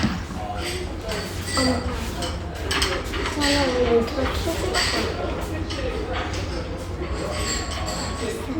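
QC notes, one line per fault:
Nothing stood out on listening to this recording.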